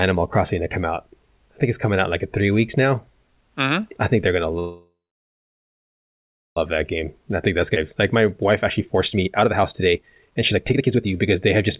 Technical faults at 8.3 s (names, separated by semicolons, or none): jitter buffer speed-up